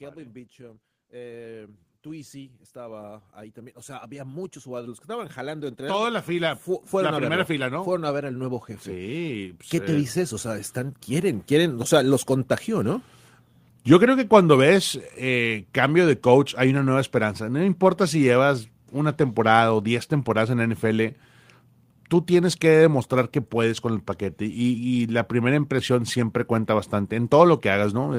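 From 0.14 s to 11.95 s, the speech is affected by automatic gain rising. The gain control judged the input too quiet and kept turning it up. The rise is slow and steady, adding about 24 dB over nearly twelve seconds. The voice and the room noise swell together, so the background grows along with the talker. The climb ends just before "los contagió".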